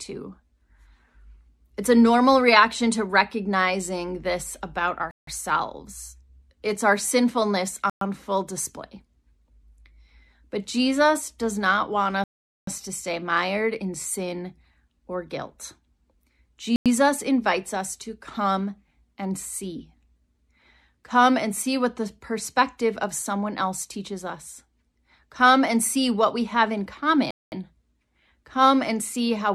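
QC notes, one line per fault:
5.11–5.27 s, Bluetooth stall: sound drops to silence for 163 ms right after "to recognizing this about", then resumes, likely a dry receive buffer while delayed packets were resent.
7.90–8.01 s, Bluetooth stall: a 115 ms gap of silence interrupts the audio before playback continues, likely held-up radio packets starving the headphone buffer.
12.24–12.67 s, Bluetooth stall: the longest dropout, 435 ms of silence before the sound picks up again, likely an extended retransmission wait after interference.
16.76–16.86 s, Bluetooth stall: a brief 98 ms silence just before "invites us to come", then normal resumption, likely the buffer emptying until late packets arrived.
27.31–27.52 s, Bluetooth stall: 214 ms of silence follows "what we have in" before the audio returns, likely interference delaying packets and pausing playback.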